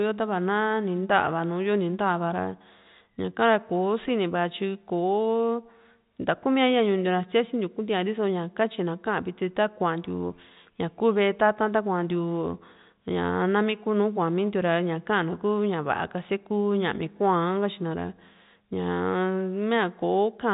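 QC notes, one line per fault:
No faults found in the speech; the narrow telephone band, with nothing above 4 kHz, is simply the normal character of the G.711 line coding.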